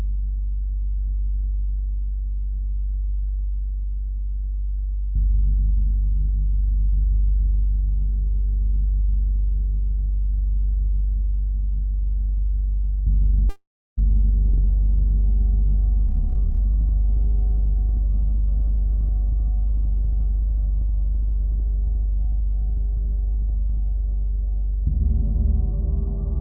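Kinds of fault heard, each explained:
Call audio freeze: At 13.49 s the sound stalls for about half a second, smearing the last instant into a brief fading tone that drops to silence for roughly 0.32 s before resuming exactly where it stopped. This was likely delayed packets emptying the jitter buffer, adding a 478 ms gap with nothing lost.
Jitter buffer speed-up: From 16.07 to 23.78 s the sound runs about 6% fast while keeping its pitch, giving it a slightly hurried feel. The receiver repeatedly trimmed tiny pitch-period-sized slices to drain the surplus buffered audio, removing roughly half a second in total.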